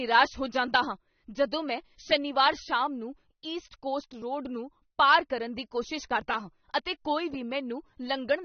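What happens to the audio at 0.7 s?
At 0.7 s the speech carries the same damage it has for the whole clip: nothing is present above about 6.3 kHz, so it sounds dull, with a smeared, warbling, fizzy texture on sibilants. The likely cause is AAC compression at a low bitrate, which fits roughly 27 kbps AAC-LC. The coder discards and coarsely quantises high-frequency content. A spectrogram shows a hard ceiling near 6.3 kHz and patchy, blocky holes below it.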